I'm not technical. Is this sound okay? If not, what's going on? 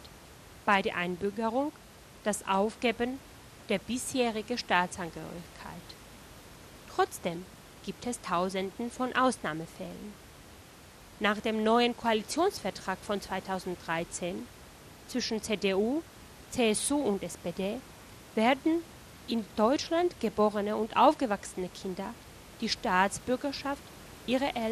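No, the speech sounds dull and gurgly all the way through, likely from MP2 compression squeezing it too hard, so the top end drops out and the rest turns grainy.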